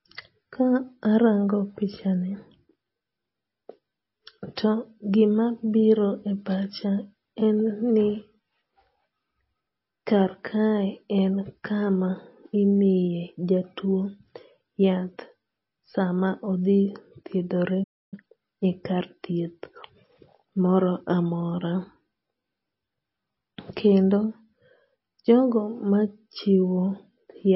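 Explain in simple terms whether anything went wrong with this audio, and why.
MP3 compression runs through the whole recording and is likely the cause of its watery sound. To save space, the encoder dropped quieter detail, so the speech loses its crispness and s sounds turn swishy or metallic.

A playback stall hits at 17.83 s, right after "sama odhi thiedhore". The sound cuts out for about 0.29 s, which likely happened because the player ran out of incoming data or was briefly held up, so nothing reached the speakers until it recovered.

Time-compressed catch-up follows from 18.14 to 18.42 s, ending just before "e kar thieth". To make up the lost time, the player snipped out small slices and blended the rest together. The speech runs at double speed but keeps its normal pitch.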